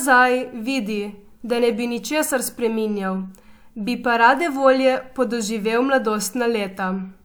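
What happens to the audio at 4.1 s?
Nothing goes wrong at 4.1 s: the speech runs on intact through that moment, with no dropout, click or distortion.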